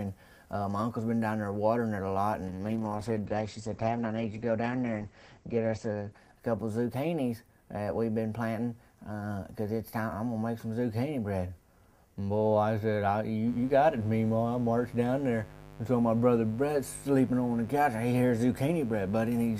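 From 2.48 s to 8.43 s there is a call bitrate drop. The encoder falls to a coarse, low rate, which fits a fall from about 96 kbps to about 10 kbps. The bandwidth narrows from 20 kHz to 8 kHz, so the sound turns muffled and watery, bottoming out for about 3.4 s. Unlike packet loss, it stays continuous, with no gaps or glitches.

From 13.44 s to the end comes mains buzz. Sharp switching spikes at twice the 50 Hz mains rate add harmonics reaching into the kilohertz range, heard as a steady, raspy buzz roughly 20 dB below the signal. Plain hum would be a smooth low tone, without this gritty, bright edge.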